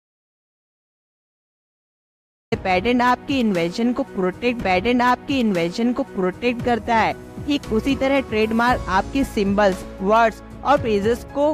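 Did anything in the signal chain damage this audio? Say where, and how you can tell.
Yes, in two places. At the capture end, there's an audio dropout to silence already under way when the clip opens, running to about 2.52 s. It's pure silence, with no room tone or hiss at all, and the sound then comes in mid-flow. That points to the input itself vanishing while the recorder kept writing samples, likely a disconnected device, a dropped link or a stray mute, so whatever happened in those first two and a half seconds is simply gone.

The second is at the playback or streaming stage: a stream segment repeated. From 4.61 s to 6.61 s, the same two seconds of audio play again, with a small blip at the jump back where the loop starts. That adds 2 s to the running time. The player fetched or queued one chunk twice and played it out, so the material isn't lost, just doubled, and the splice gives it away.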